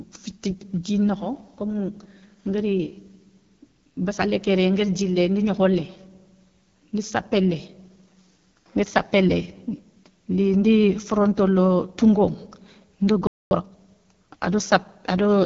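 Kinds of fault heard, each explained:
AMR wideband (HD Voice) codec: The speech went through a low-rate wideband phone codec that rebuilds the voice from a pulse-excited vocal tract model. Here it sounds rough and raspy throughout, fitting a rate near 8.85 kbit/s, and nothing is heard above about 7 kHz.
Playback stall: The player was likely starved of data or briefly blocked and had nothing to send to the output. The speech cuts out mid-flow at 13.27 s and stays silent for about 0.24 s before resuming at 13.51 s.
Time-compressed catch-up: To clear the backlog from the stall, the player cuts out small slices of audio and cross-fades the remaining pieces together. From 13.51 to 13.73 s the speech runs at twice normal speed without any change in pitch, sounding hurried.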